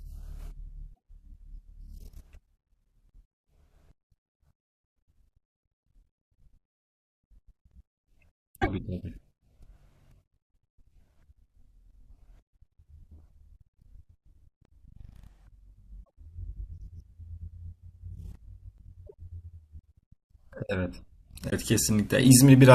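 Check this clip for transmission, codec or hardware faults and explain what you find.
Two faults are present in the speech: damaged compressed data in five places, and one stretch played too fast.

Damaged data in a compressed stream occurs at 0.90–0.94 s, 8.58–8.68 s, 16.00–16.09 s, 19.03–19.14 s and 21.46–21.53 s. Corrupted frames throw the decoder out of sync until it finds the next valid header. Each event is a brief disruption in the audio.

A section at the wrong speed runs from 14.02 to 20.30 s. It plays at 1.18 times normal speed, so the voice rises by about three semitones and sounds hurried. The likely cause is playback or editing against a mismatched clock, which shifts speed and pitch together.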